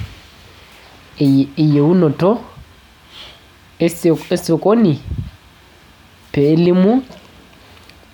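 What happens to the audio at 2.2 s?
Nothing goes wrong at 2.2 s; the speech carries on intact through that moment, with no dropout, click or distortion.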